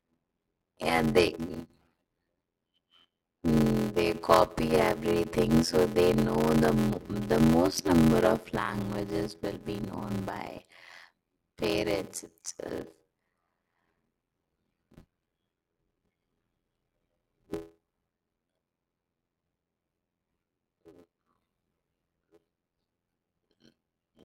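A block size mismatch (padded) runs throughout this speech: each short written block is zero-filled to the next stage's read size, giving an 86.1 Hz buzz and 0.625x speed at normal pitch, which fits 512-sample reads.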